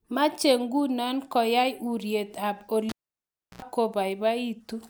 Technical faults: cable pulled and plugged in

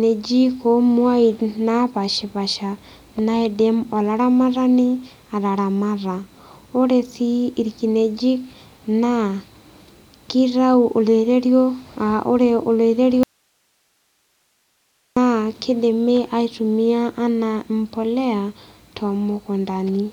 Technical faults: audio dropout to a faint residue

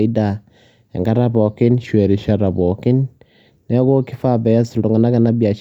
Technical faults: drift correction step

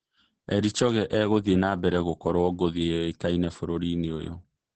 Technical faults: Opus voice compression

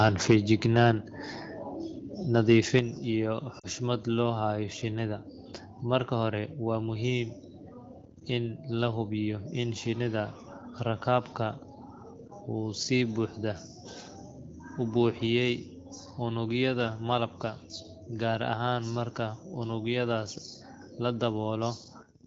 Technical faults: microphone overload; microphone volume stepped down; lost AMR speech frames

